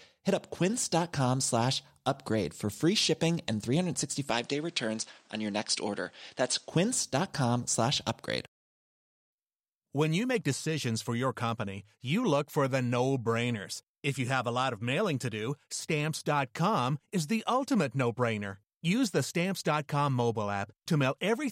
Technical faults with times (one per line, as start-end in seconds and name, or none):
4.30-6.70 input switched to a poorer device